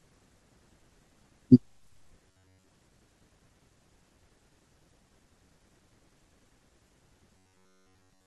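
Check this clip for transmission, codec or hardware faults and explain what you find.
Two stretches of robotic sound from repeated short buffers turn up in the speech: 2.29 to 2.68 s, and again from 7.37 s to the end. Most of the first stretch and all of the second become a rigid metallic buzz at 93.8 Hz that only loosely tracks the words. The likely cause is audio arriving too slowly, with the player looping its last chunk of roughly 10.7 ms. That fixed loop length is what locks the pitch in place, while the real signal underneath is dropped.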